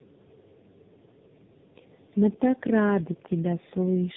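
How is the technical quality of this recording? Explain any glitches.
Quality is poor throughout, from tandem speech coding. The sound passed through roughly three speech coders in succession, which fits AMR-NB, then G.726, then AMR-NB again. Each re-encoded the previous one's damage, leaving muffled, rough, warbling speech with nothing above 3.8 kHz, harsher than any single narrowband codec.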